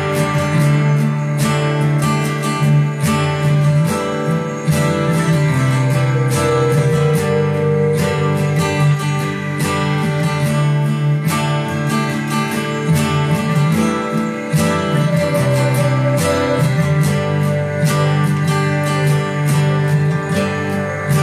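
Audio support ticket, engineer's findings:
Digital radio blending to analogue, 8.93–11.27 s. Receiver lost the digital stream and cross-faded over 115 ms to the FM simulcast, then back. Level dips about 2 dB, with hiss roughly 40 dB down. Hiss rather than muting separates it from a plain digital dropout.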